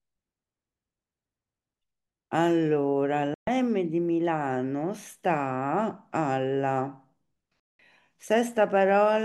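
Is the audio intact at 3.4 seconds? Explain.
No. The speech cuts to silence from 3.34 to 3.48 s, a digital broadcast dropout: lost or corrupted frames made the receiver mute, losing about 128 ms.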